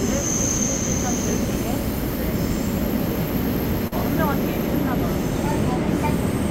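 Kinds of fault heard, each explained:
Short concealed packet loss: About 40 ms of audio arrived too late or not at all, near 3.87 to 3.93 s. The receiver covered the gap by extending the preceding sound, then blended back into the real signal. It is heard as a brief smear or wobble.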